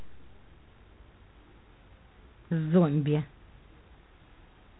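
Speech, and the whole thing has that harsh, rasping hiss you get from G.726 ADPCM pushed below its usual rate. The hiss rises and falls with the talker's level, and the coarse steps sound like roughly 3 bits a sample, which fits the 24 kbit/s mode. Each sample only carries a few bits of difference from the codec's prediction, so the error is plainly audible. On top of that, there's nothing above about 3.9 kHz, so it's squarely telephone band.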